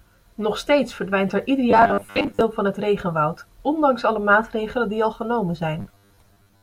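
Speech, with robotic sound from repeated short buffers in two stretches: 1.71 to 2.41 s and 5.79 to 6.62 s. In both, the voice collapses into a rigid, metallic buzz fixed at 100 Hz, which fits a roughly 10 ms block being replayed. The likely cause is audio arriving too slowly, so the last block is looped while real material is dropped. About half the first stretch is repeated, and most of the second.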